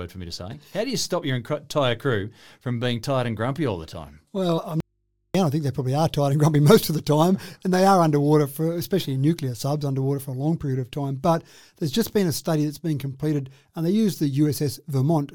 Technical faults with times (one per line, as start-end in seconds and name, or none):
4.57 compressed frames skipped
4.80-5.35 audio dropout to a faint residue